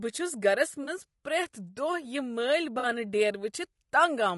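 Running through the whole clip is damage that most likely comes from low-delay AAC compression, AAC-ELD, at a rate the grain suggests is near 32 kbps. Each frame codes roughly 500 frequency lines with a low-delay window, and at this bitrate there are too few bits to fill them properly. The speech therefore sounds plainly rough and grainy, with noise filling the spaces between harmonics and a top band that sounds thinned and synthetic.

At 0.83 s, right after "چھس گرس", and again at 2.79 s, there is AAC frame loss with concealment. Data went missing, a span that fits two lost frames of about 40 ms, and the decoder patched each hole by reusing and reshaping the last good spectrum. Each patch lasts roughly 60 ms and comes through as a brief smeared, noisy, phasey blur where the speech loses its definition before clean decoding resumes.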